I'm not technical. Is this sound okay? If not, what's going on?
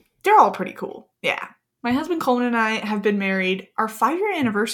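Yes, this one's fine: nothing in the recording stands out as a technical problem, so there's nothing to worry about here.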